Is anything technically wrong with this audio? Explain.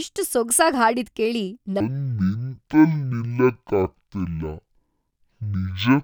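Yes. From 1.80 s to the end, the speech suddenly drags to half speed and drops a full octave, about 12 semitones, so it sounds slowed and deep, with a fainter mirrored image of the sound in the upper half of the spectrum. This is stereo read as mono: the left and right samples, which alternate in the stream, are played one after another as a single channel. Every stereo frame becomes two consecutive mono samples, which doubles the duration and halves the pitch.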